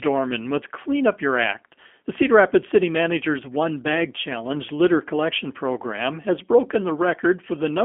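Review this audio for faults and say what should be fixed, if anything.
G.729 codec damage runs through the whole recording. The speech is rebuilt from a vocal-tract filter, pitch predictor and sparse pulses, which gives it a plainly rough, synthetic quality that points to an 8 kbit/s VoIP link. On a spectrogram, energy is confined to 250 Hz to 3.4 kHz, with nothing above 3.6 kHz and smeared harmonics. To prevent it, carry the call over a wideband codec such as Opus or G.722 instead.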